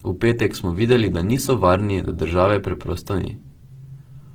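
Speech sounds grainy and rough throughout, with detail reaching about 20 kHz, which is likely Opus compression in its music mode at a low bitrate near 16 kbps.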